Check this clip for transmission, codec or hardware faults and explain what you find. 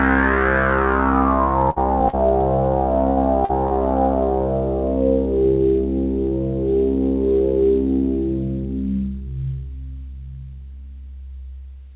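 Two kinds of packet-loss fault are audible, both coming through a narrowband call path whose band stops at 4 kHz, consistent with G.711 A-law at 64 kbps.

Burst of packet loss at 1.70 to 1.78 s and 3.11 to 3.19 s. About 60 ms of audio never arrived in each case, so the receiver stretched the last sound into a fading tail and then jumped ahead. The result is a held buzz or thinning hiss followed by a skip.

Short concealed packet loss at 2.09 to 2.15 s, 3.45 to 3.51 s and 3.67 to 3.73 s. Each time about 40 ms went missing, and the decoder extrapolated from the preceding sound before blending back in. These come across as a brief smear or wobble rather than a hold and jump. Any very short transient at those moments may simply drop out.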